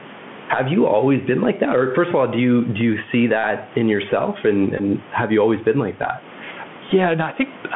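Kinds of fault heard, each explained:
Gain pumping: The gain rises in the pauses and sinks under each louder stretch of speech, swinging by roughly 10 dB. Loud and quiet syllables sit unnaturally close together, giving a squashed, breathing quality. The likely cause is microphone gain set far too high, with a fast limiter clamping down on every peak. Room noise that stays at a fixed level would not move like this.
Bluetooth CVSD headset codec: The speech is confined to a narrow telephone band from about 150 Hz to 3.4 kHz, with plainly audible coding damage. CVSD sends one bit per sample at 64 kHz, stepping up or down with an adapting step size. Fast, loud high-frequency sounds outrun the step and distort, s sounds turn scratchy, and a granular hiss sits under the speech. That grainy, slope-limited roughness separates it from the cleaner narrowband sound of a filter alone.
Bluetooth headset packet repeated: At 4.78 to 4.81 s the sound turns into a brief steady buzz near 267 Hz, because lost packets are replaced by repeating the previous packet every 3.75 ms. 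The 15 ms gap fits about four lost packets. At 6.90 s a shorter repeat, fitting about three packets, comes through as another short buzz. Unlike a plain dropout, which leaves silence or a click, the repeats produce a pitched, mechanical buzz.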